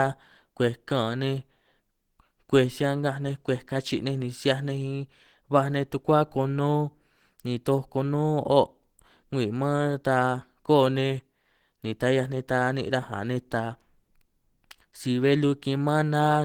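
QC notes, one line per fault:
Throughout, Opus compression: the speech was likely squeezed through an Opus encoder at a very low rate, with the grainy, hoarse texture pointing to around 16 kbps and its hybrid speech mode rather than the music mode. At that rate the encoder cannot carry the fine detail of each band, so it patches the gaps with borrowed or noise-like content. The result is plainly audible, leaving the speech rough, grainy and somewhat muffled, though the full bandwidth is kept.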